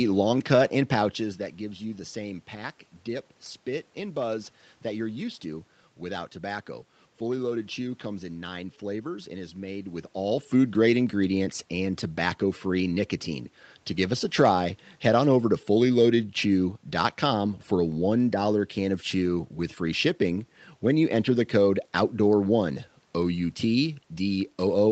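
No technical faults are audible.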